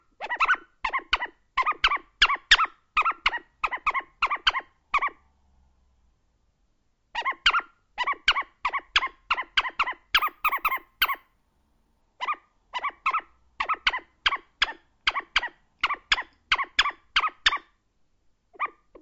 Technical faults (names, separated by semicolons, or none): imaging from sample-and-hold upsampling